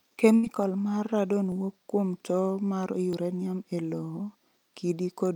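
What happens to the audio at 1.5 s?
At 1.52 s a sudden jump, likely a dropped buffer (overrun) where about 5 ms was overwritten unread. The waveform shows a step, the spectrogram a thin vertical line.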